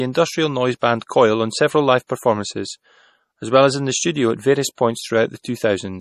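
Throughout the speech, plainly audible MP3 compression damage gives a watery, swirly texture as weak frequency lines switch on and off from frame to frame. A spectrogram shows a hard ceiling at 14.6 kHz and speckled, patchy detail below it, which fits a low bitrate near 40 kbps, the likely cause.

Pre-echo appears right after "industrial noise" at 0.79–0.82 s, after "on several live" at 2.07–2.10 s, after "the studio at various" at 4.75–4.78 s, and again at 5.42–5.45 s. In each case the codec spreads quantisation noise across a block, so hiss lasting 26 to 29 ms runs ahead of an attack and softens it. On a spectrogram this shows as a broadband smear just before each onset, and on the waveform as a raised noise floor leading into it.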